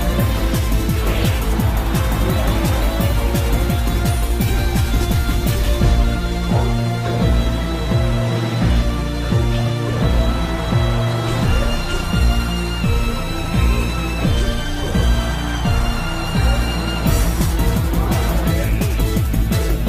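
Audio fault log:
19.37 s, DC step. The zero line of the waveform jumps suddenly, by about -22 dBFS. That abrupt shift in offset is heard as a single low thump near the end of the clip. The sound itself carries on unchanged over it. The offset does not hold. It drains away slowly, as a 5 Hz high-pass would let it, so no second click follows. The thump comes only from the sudden step.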